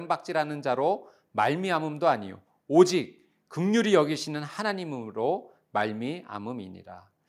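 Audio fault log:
No faults heard in this speech.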